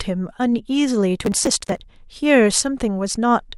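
It's a short speech clip, and from 1.2 to 1.8 s there's a burst of processor overload crackle: a gritty, tearing texture laid over the sound that clears as soon as the load drops. What you're hearing is the processor falling behind and missing buffer deadlines back to back, with each missed chunk simply skipped, leaving a hard-edged gap. The spacing of the clicks fits small buffers of around 10 ms, with dozens of them dropped across that stretch.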